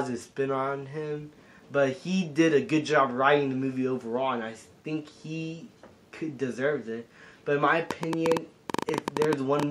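From 7.91 to 9.64 s there's a train of clicks, about 11 per second at an uneven pace, loud ticking well above the sound, likely from electrical interference.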